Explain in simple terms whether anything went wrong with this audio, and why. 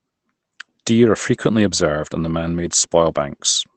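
Nothing went wrong with this speech recording: it passed through an internet call connection, which shapes the sound the way calls normally do and trims some of the highest tones, and nothing in it drops out, breaks up or gets distorted.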